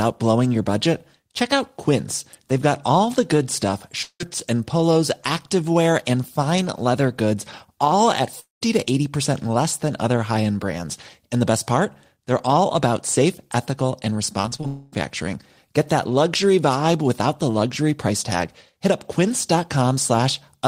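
Speech with three short holes where the sound smears into a fading buzz. At 4.02 to 4.21 s, after "all the good stuff" and before "and polos activewear and", about 180 ms is lost and ends in 70 ms of silence. At 8.40 to 8.62 s, after "leather goods all at", about 210 ms is lost with 150 ms of silence. At 14.67 to 14.93 s, about 250 ms is lost and smoothed over with no silence. Each is likely a long network dropout, with the receiver stretching the last sound until nothing more arrives. Just before that, from 14.42 to 14.65 s after "about safe ethical and", the sound turns choppy and robotic. This is repeated packet loss: six gaps, none longer than 25 ms, patched one after another, covering about a third of that span.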